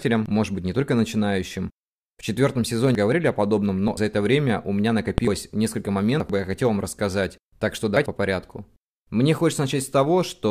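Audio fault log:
0.26–0.44, 2.95, 3.88–3.97, 5.18–5.37, 6.20–6.30, 7.97–8.06 s: compressed frames skipped. Speech jumps ahead by roughly 0.1–0.5 s at each point (around 0.4 s at 2.95, just before "о подобном"), in whole-frame steps.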